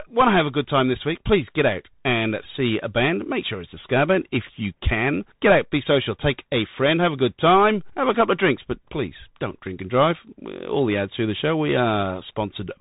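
The speech passes through a Bluetooth CVSD headset codec from start to finish. CVSD sends a single up-or-down bit per sample and adapts its step size, and its coarse one-bit tracking fits a 64 kbps headset link. Nothing above about 3.8 kHz survives, so the speech sounds narrow and muffled. The coding damage is plainly audible: fast, loud rises outrun the adapting step and break up, sibilants turn scratchy, and a grainy hiss sits beneath the speech.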